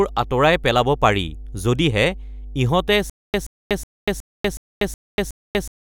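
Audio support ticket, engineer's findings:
Mains hum, whole clip: steady 50 Hz tone with low harmonics under the speech, roughly 15 dB below it. Points to a ground loop or nearby transformer coupling the power line into the signal path. Check cabling, grounding, and proximity to power supplies.

Stutter with silent gaps, 3.10 s to end: the same 127 ms burst repeats seven times at a 368 ms period, separated by 242 ms of digital silence. Likely a stalled player or stream replaying its last buffered fragment on each retry, then running empty. Audio due in that span is lost.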